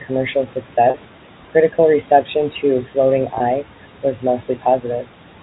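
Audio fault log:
Throughout: noise suppressor artifacts. The suppressor pulls steady background down by about 12 dB in the gaps, frame by frame, so the room noise, which sits about 18 dB under the speech, sinks between phrases and swells back under them. Unlike a plain noise gate, the change is spread across frequency bands and never fully closes.
0.90 s and 3.38 s: packet loss with pitch repetition. At 0.90 s a gap of 40 ms, which fits two lost 20 ms packets, is bridged just before "critical reception to" by repeating the last pitch period, giving a brief held, buzzy tone. At 3.38 s a single 20 ms loss is patched the same way and is shorter still. Unlike a dropout or a suppressor cut, the gap is filled with a repeated periodic sound rather than sinking to silence or fading softly.
4.56–4.84 s: speech cut by the noise suppressor. Within this stretch the suppressor mistakes part of the speech for background and turns it down by as much as about 9 dB, affecting roughly a tenth of a second in all. 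Those sounds come across as swallowed or faint. Unlike packet loss, nothing is repeated or replaced: the speech simply dips in level along with the noise, without any buzz, stutter or sudden hard break.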